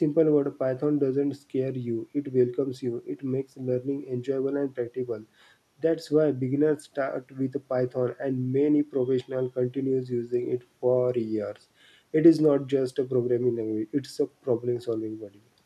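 No technical faults are audible anywhere in the speech recording.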